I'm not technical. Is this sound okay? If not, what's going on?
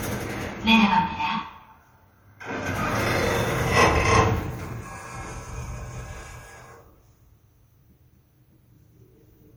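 Yes, this sound is okay, and nothing is going on that needs fixing.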